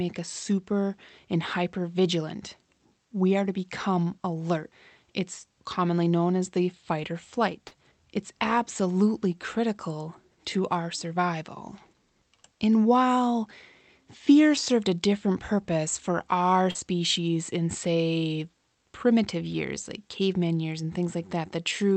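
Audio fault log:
7.67–7.73 s and 16.71–16.77 s, short concealed packet loss: About 40 ms of the call arrived too late each time, just after "as the fight or" and after "different purpose for our". The receiver stretched the preceding sound over the gap, about 34 and 38 ms, then blended back. Each gap is a brief smear.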